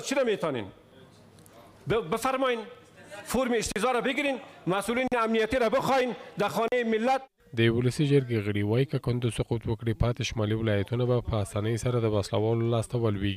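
A train of clicks runs from 3.46 to 4.45 s: about seven sharp, similar ticks at roughly 5.1 per second, spaced unevenly and reaching about the level of the audio itself. They are most likely interference from nearby equipment or a faulty connection or power supply. On a waveform they appear as thin isolated spikes standing out from the surrounding audio, and on a spectrogram as narrow vertical lines spanning the full frequency range, irregularly spaced across that one-second stretch.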